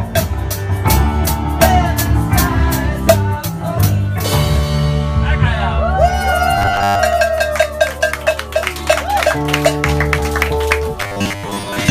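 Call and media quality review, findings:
Robotic sound from repeated short buffers, 6.58–6.99 s and 11.01–11.91 s: rigid metallic buzz locked at 100 Hz, most of the audio replaced. Likely cause: receive buffer underrun re-playing a 10 ms block. Unlike gaps or clicks, no silence, with a steady buzz pitch.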